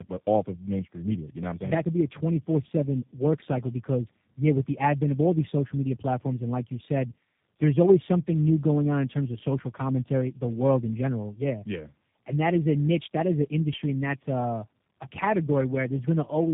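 Speech, with tandem speech coding throughout: the band stops at about 3.7 kHz, and the rough, muffled, warbly texture fits three speech coders in a row, likely a G.729A, CVSD and G.729A chain, each re-encoding the previous coder's already degraded output.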